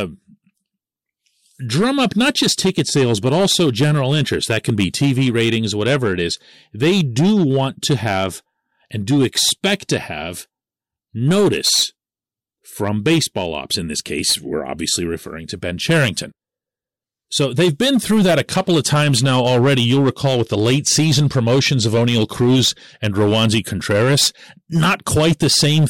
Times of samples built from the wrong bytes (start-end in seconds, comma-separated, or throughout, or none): none